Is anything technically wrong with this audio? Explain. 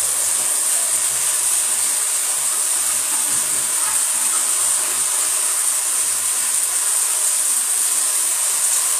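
Yes. Likely HE-AAC compression, running the whole way through: the treble is rebuilt rather than coded, by copying lower bands upward under a coarse envelope, as fits a low rate around 24 kbps. The top stays bright yet sounds gritty and metallic, and nothing reaches above 14.9 kHz.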